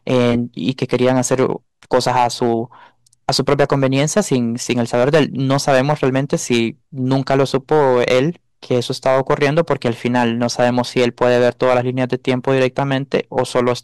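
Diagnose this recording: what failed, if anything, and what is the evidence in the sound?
Hard clipping runs through the whole speech clip: the louder syllables come out with a harsh, gritty fuzz rather than clean peaks. The signal was driven about 9 dB past what a converter or sample-format stage could pass, so roughly a few percent of samples were cut flat, adding high harmonics.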